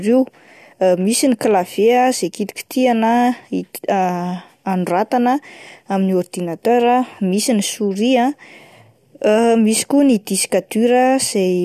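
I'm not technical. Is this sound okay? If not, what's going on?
Yes, the recording has no technical problems that can be heard anywhere in it.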